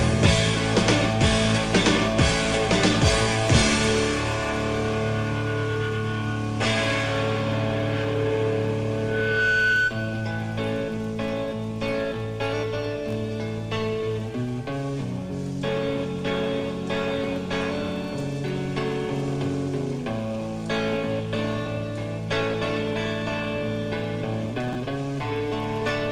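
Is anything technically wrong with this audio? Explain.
Yes. At 24.73 to 24.75 s there are chunks out of order: one 10 ms block arrived a single chunk late and was played after its successor. Nothing is missing, but the swapped order leaves hard joins that sound like a brief garbled moment.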